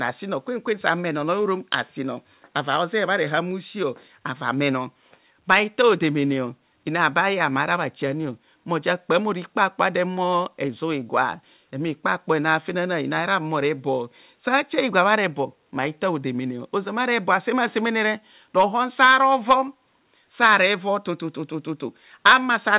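No technical faults can be heard in this speech recording.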